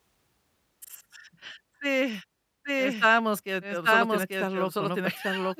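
From 2.65 s to the end, a doubled audio track appears: an equally loud copy trails by about a second, likely a second capture path, showing as repeated, abruptly starting waveform shapes.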